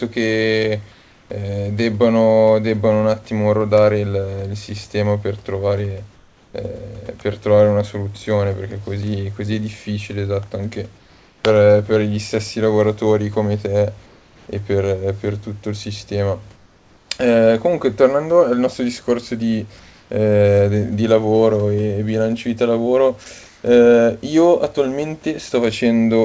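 In the pauses between phrases, the sender likely stopped transmitting while its voice detector heard no speech, and the receiver filled the gaps with synthetic comfort noise in place of the background. This happens at 0.92 to 1.30 s, 6.16 to 6.54 s, 10.98 to 11.44 s, 14.06 to 14.48 s, 16.56 to 17.10 s, 19.80 to 20.10 s and 23.46 to 23.64 s, each lasting roughly 0.2 to 0.5 s. The real room background, about 35 dB below the loud speech, gives way to a smooth, featureless hiss that is about 1 to 4 dB quieter, though the last patch matches the level. The texture still changes.

At 23.24 s, the sound was dropped by the voice detector, likely because it mistook the sound for background. About 10 ms of speech is lost and replaced by the same steady comfort noise just before the final pause. The G.722 call path limits everything here, including the substituted noise, to below 8 kHz.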